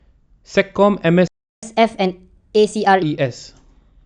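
A playback stall interrupts this speech recording at 1.28 s: the sound cuts out mid-flow and stays silent for about 0.35 s, resuming at 1.63 s. The likely cause is the player running dry of buffered data or having its output thread briefly blocked. Catch-up at higher speed follows immediately, from 1.63 s to 3.03 s. The player works through its backlog by resampling at 1.25 times normal speed, so the speech runs faster and sits roughly four semitones higher in pitch until the lost time is recovered and it drops back to normal.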